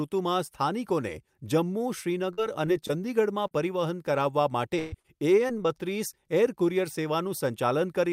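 Brief smears and wobbles, each a few hundredths of a second long, mark the speech at 2.33, 2.65, 2.87 and 3.47 s. These are short concealed packet losses. Between 20 and 40 ms of audio arrived too late or not at all, and the receiver patched each hole by extending the preceding sound, pitched if voiced, noise-like if not, before blending back into the real signal.

From 4.79 to 4.94 s the sound stalls into a held, fading continuation and then picks up further along, with about 140 ms missing. This is a burst of packet loss. Several packets in a row failed to arrive, and the receiver stretched the last sound across the gap while turning it down. The fill covers nearly the whole gap, so there is no silence, but the content in between is gone.

Three more short concealed packet losses follow at 5.00, 5.48 and 5.63 s, heard as brief smears or wobbles. The first hides 40 ms and the other two 20 ms each. 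The later pair are the briefest patches.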